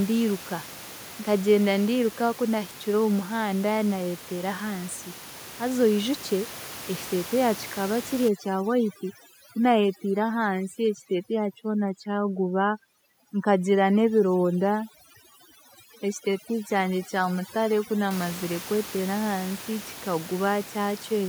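Overdone noise removal runs from 8.28 s to 18.11 s. The noise reducer is set far too aggressively, so any frequency band that sits close to its estimate of the room noise, which lies about 15 dB below the speech, is pushed down hard or removed entirely. Quieter parts of the speech fall under that threshold and vanish too, leaving a lowered background speckled with twinkling artefacts.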